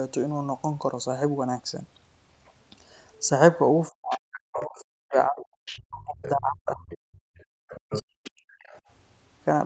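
From 3.9 to 6.86 s the speech keeps dipping and cutting out, sometimes by around 40 dB, for about two seconds in total. That's speech suppressed in double talk, likely the echo canceller losing track of which voice is local while both sides talk, so it turns everything down. It happens again from 7.45 to 8.51 s, about a second of drops.

In and around those stretches you also get the other side's voice leaking through: 4.09–4.84, 5.41–5.81, 6.22–6.29, 6.9–6.98 and 7.37–7.44 s, mostly about 15 dB under the speech, the last one barely there. From 7.75 to 8.8 s it's louder, only about 10 dB down. It's the far end coming off the loudspeaker and into the mic, probably because the canceller didn't fully remove it.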